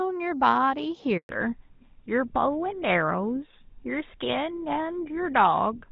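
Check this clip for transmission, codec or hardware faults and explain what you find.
Two faults appear, both tied to a network switch partway through the speech.

Handover gap, 1.17 to 1.29 s: during the network transfer no speech frames arrived, so the sound cuts out for 120 ms before the new link begins.

Fallback to narrowband, from 1.29 s to the end: the call leaves the HD Voice path, which until then sounds like AMR-WB at about 12.65 kbit/s with only light coding damage. It drops to a narrowband codec that fits GSM full rate, and nothing above 4 kHz remains, so the speech turns duller and rougher.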